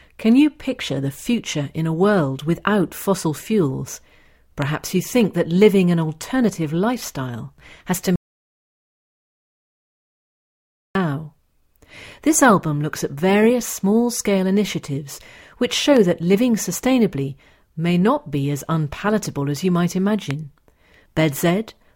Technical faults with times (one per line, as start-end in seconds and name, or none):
4.62-4.64 loud pop
8.16-10.95 audio dropout to silence
15.97-15.99 loud pop
20.31-20.33 loud pop